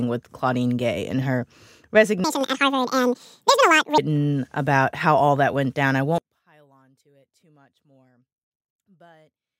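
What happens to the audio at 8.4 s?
At 8.4 s the speech has almost disappeared. The drop begins at 6.18 s, just after "that went down I", and lasts to the end at 9.60 s. The likely cause is one channel inverted. One stereo channel has flipped polarity. When the two channels are summed to mono, the centred voice cancels itself out. The level falls by about 36 dB. Only a faint residue of the channel difference remains.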